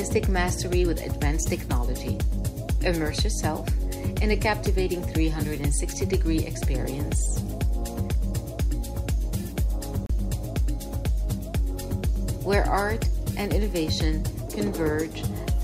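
A digital broadcast dropout cuts the audio from 10.06 to 10.10 s, a silent hole of about 32 ms, which fits a single lost frame. The receiver muted when that frame arrived corrupted or missing, then resumed with the next good one, so that stretch of programme is gone.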